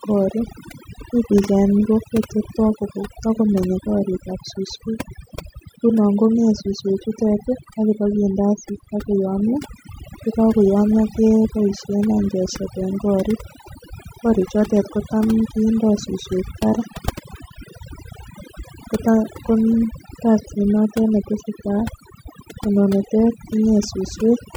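From start to finish the speech carries overdone noise removal. A noise reducer pushed too hard has cut individual frequency bands whenever they sat close to its noise estimate, taking the quieter parts of the voice along with them. Between phrases the background drops to near silence, dotted with twinkling specks. A spectrogram would show scattered isolated blips in the gaps and ragged, holed-out harmonics under the speech.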